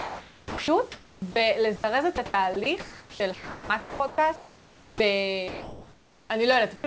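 Speech sent over a call link, with nothing above 8 kHz (consistent with a wideband codec such as G.722 at around 64 kbps) and room noise about 30 dB below the talker, is repeatedly cut up by discontinuous transmission. From 0 to 1.36 s and again from 2.16 to 5.0 s the sound is chopped by the voice detector. About 1 s of the first stretch and about 1.8 s of the second are swapped for synthetic fill, so quiet syllables and word edges flicker in and out. This is likely the sender's detector toggling on and off. Random packet loss would instead leave short, irregular concealment glitches rather than stretches of smooth noise. At 1.76 to 1.84 s (80 ms) and 5.48 to 6.3 s the sound is dropped by the voice detector. The first gap loses 80 ms of audio, and the second replaces 820 ms, of which about 290 ms was real sound, with steady noise until transmission resumes. The cause is likely that low-level speech was classed as background. 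A single clean gap like this, with no repeated toggling, separates it from chopping. At 6.76 to 6.84 s, comfort noise takes the place of the background during a pause. It is a featureless hiss about 4 dB quieter than the real room noise, which sits about 26 dB below the loudest passages. This is likely DTX filling a silent interval where no speech was lost.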